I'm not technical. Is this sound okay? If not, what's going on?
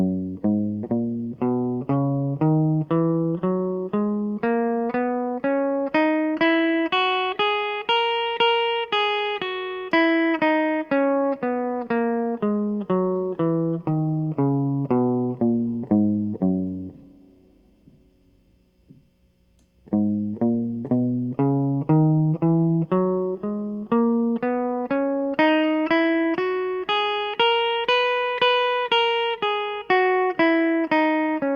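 Yes, the music is fine: nothing in it points to a technical fault.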